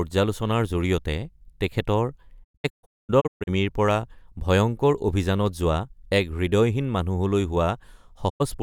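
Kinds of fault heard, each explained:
Digital broadcast dropout: the receiver stopped getting usable frames and muted until clean ones arrived, so the speech from those moments is simply gone. Between 2.43 and 3.49 s it breaks into a cluster of short holes, about 0.7 s missing in total, the longest gap around 224 ms, each with a quick 20 ms fade. A single 96 ms hole hits at 8.28 s. The gap sizes fit frames of roughly 32 ms.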